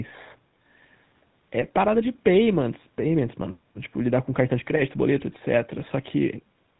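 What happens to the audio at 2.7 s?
At 2.7 s the speech carries GSM full-rate codec damage, which runs through the whole clip. The codec rebuilds the voice from a vocal-tract model driven by sparse, regularly spaced pulses, which fits 13 kbps coding, and cuts everything above 4 kHz, giving a plainly audible buzzy, gravelly roughness.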